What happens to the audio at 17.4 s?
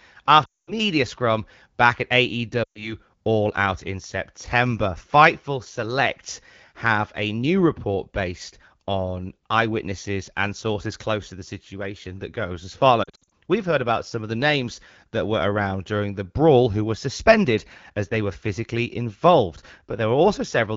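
Nothing goes wrong at 17.4 s: the speech there comes through intact, carried by the AMR wideband (HD Voice) codec at 12.65 kbit/s, with only the light coding character expected at that rate.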